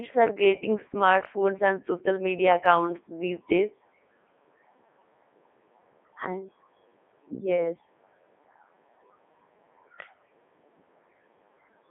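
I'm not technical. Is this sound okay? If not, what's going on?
No, the speech doesn't sound natural. From start to finish it has passed through a Codec 2 vocoder, a very low-data system used for digital radio. It doesn't send the actual sound wave. It sends only a rough outline of pitch, loudness and tone, and the receiving end rebuilds the voice from simple tones. That is why it sounds robotic and buzzy, and here the damage is heavy. It also sounds thin, like a phone line, with the deep lows and crisp highs cut away.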